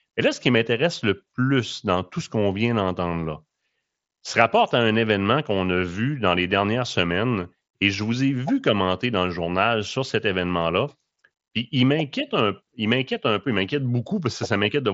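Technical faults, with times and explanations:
No technical faults found; the speech arrives over a Bluetooth mSBC headset link, its band stopping near 7.7 kHz as that path sets it.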